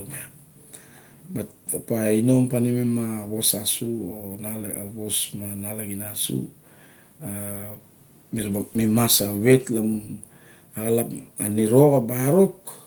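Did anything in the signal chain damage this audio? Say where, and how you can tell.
No, nothing in the signal chain damaged this speech. The Opus voice compression is working as intended in its hybrid mode with fullband coverage, so content reaches up to about 20.1 kHz, and the coding leaves only light traces consistent with a rate around 24 kbps.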